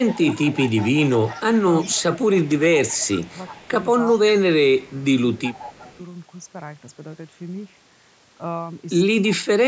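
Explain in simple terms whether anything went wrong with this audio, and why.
Yes, two things went wrong. From 0.08 to 4.19 s, 5.43 to 5.98 s and 9.29 to 9.36 s, a faint copy of the speech returns about 0.37 s late. This is echo leak, likely from a loudspeaker's sound slipping past the echo canceller. Unlike reverberation, it is a distinct delayed repeat rather than a smooth room tail.

The talker's own speech also gets turned down at 0.05 to 0.2 s, in patches across 1.58 to 5.92 s, and almost disappears from 9.34 to 9.65 s. This is speech suppressed in double talk, likely the canceller ducking everything while both sides spoke. Unlike a dropout, the sound dips instead of vanishing abruptly.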